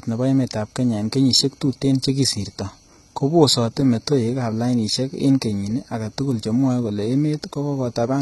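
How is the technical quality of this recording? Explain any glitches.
The technical quality is poor, with heavy codec damage running through the entire clip. HE-AAC compression, likely the cause, is audible from start to finish: the upper spectrum is rebuilt from copied lower bands rather than coded directly. That makes the sibilants gritty and metallic and the treble bright but unnatural, which points to a very low bitrate of about 16 kbps.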